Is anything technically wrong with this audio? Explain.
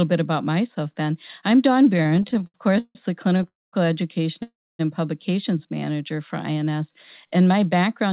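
Yes, there are several delivery problems, all of the kind you get when packets arrive unevenly on a call. Around them, the sound has that narrowband telephone quality, with nothing above 4 kHz, which fits G.711-style coding.

From 1.98 to 2.97 s there's a run of repeated stalls (stutter). Packets kept turning up late, so the jitter buffer drained about sixteen times in under a second. Each time, the receiver padded by carrying the last sound forward, adding 370 ms in total, with the longest hold at 153 ms. That's over a third of the stretch, so the speech drags and stutters, though nothing is actually lost.

Right after, from 3.37 to 3.41 s, there's a short stall from a late packet. One packet missed its slot and the receiver stretched the previous sound by 22 ms until it showed up, then picked up exactly where it left off. You hear a sound held just a touch too long, maybe with a faint buzz or dip.

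Then there are two call audio freezes, at 3.48 to 3.75 s and at 4.43 to 4.81 s. Packets were most likely held up in transit long enough to empty the buffer completely. Each time, the last sound continues briefly and fades, then there's dead air, about 220 ms in the first and 270 ms in the second. The speech then resumes from the same point, so 250 ms and 364 ms of gap get inserted into the flow.

Finally, from 5.52 to 6.17 s, there's a jitter buffer slow-down. To rebuild its reserve, the receiver repeated single pitch periods and small slices of pause over and over, adding 92 ms. That section plays at about 87% speed with the pitch unchanged, so sounds come out drawn out, maybe with a slight warble.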